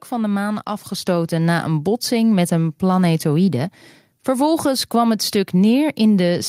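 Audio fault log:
1.02 s, microphone volume stepped up: the call software raised the input gain by about 5 dB at once, so voice and background jump louder together between "van de maan" and "na een botsing met".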